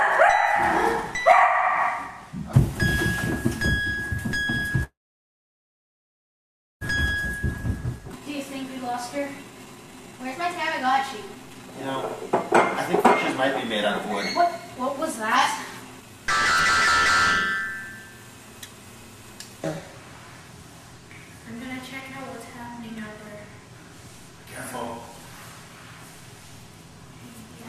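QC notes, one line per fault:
4.83–6.83 s, call audio freeze: the last sound is held on briefly, then the audio falls to near silence for about 1.9 s before picking up exactly where it stopped. The sound points to packets held up in transit so that the jitter buffer ran empty, likely the cause here. Unlike a dropout or skip, nothing is lost. A pause of about 2 s is inserted, and everything after it runs that much later.
7.98–11.72 s and 15.66–16.25 s, jitter buffer speed-up: playback runs fast at unchanged pitch, at 131% in the first stretch (roughly a second trimmed) and 109% in the second (something like 70 ms trimmed). The receiver is cutting short pitch-period-sized pieces over and over to drain excess buffered audio. Because pitch stays put, this is not a resampling or clock error, and the rhythm sounds hurried rather than chipmunk-like.
8.12–8.14 s, skip ahead: within the first fast stretch, playback jumps forward with only a tiny gap of a few milliseconds. 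Around 0.7 s of audio is simply gone, and the two sides are butted together almost directly, which fits a chunk discarded while later audio was already queued. This differs from the freeze because material is missing and there is no pause, and from the speed-up because the loss is one abrupt jump, not a steady hurry.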